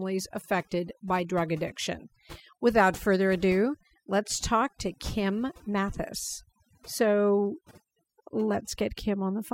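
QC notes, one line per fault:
Throughout: overdone noise removal. A noise reduction stage was pushed too hard on noisy speech. It pulls individual frequency bands down whenever they sit near its noise estimate. Quiet parts of the voice get cut too. The background drops and breaks up into twinkling specks.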